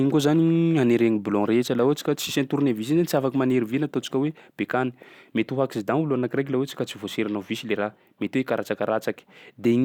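Nothing stood out as a technical problem on listening to this speech recording.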